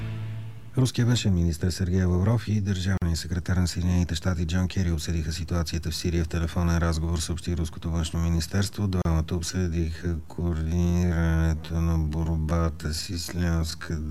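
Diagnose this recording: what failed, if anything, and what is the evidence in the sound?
Brief silences of 43 ms at 2.97 s and 34 ms at 9.02 s, six seconds apart, are gaps at joins of encoded pieces whose encoder delay and padding were never trimmed.

From 9.49 s onward the pace abruptly halves at unchanged pitch: a time-stretched section, likely from software repeating short pieces.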